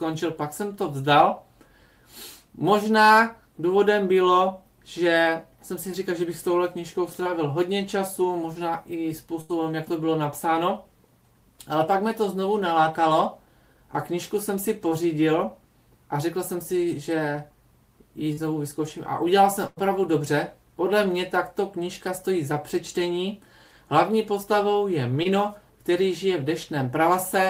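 At 7.23–7.27 s and 14.89–14.93 s, short concealed packet loss: about 20 ms of audio went missing and was patched by extending the preceding sound, leaving a brief smear or wobble. From 9.41 to 9.51 s comes a burst of packet loss. A full 80 ms gap is filled with a held, fading continuation before the sound jumps ahead, so the sense is of missing material rather than a momentary blur. Short concealed packet loss returns at 18.33–18.39 s, covering about 40 ms, and a second burst of packet loss at 19.67–19.79 s bridges 100 ms with a decaying buzz or hiss. A final short concealed loss of about 20 ms sits at 25.23–25.27 s.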